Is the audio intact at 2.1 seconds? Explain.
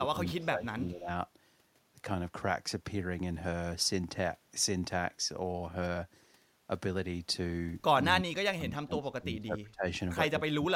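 Yes, the audio is intact at 2.1 seconds, with no audible fault.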